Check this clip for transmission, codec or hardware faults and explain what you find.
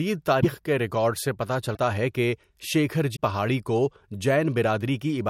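The speech has three short glitches, at 0.41–0.45 s, 1.74–1.77 s and 3.15–3.18 s. They sound like a broken MP3 bit reservoir. Each is a brief chirp or hole where the audio jumps ahead. The likely cause is dropped frames leaving later frames reading another frame's bytes, which fits roughly 26 ms MP3 frames. On a spectrogram each shows as a thin broadband smear or gap with a discontinuous waveform edge.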